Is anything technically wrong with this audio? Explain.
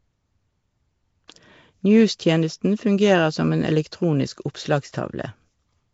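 Yes. Throughout the speech there is a rough, hissy halo and a smeared, underwater quality, with nothing above 7.7 kHz. This is likely Nellymoser compression: coarse blocks with too few bits leave weak bands filled with noise, damage consistent with a low bitrate near 32 kbps.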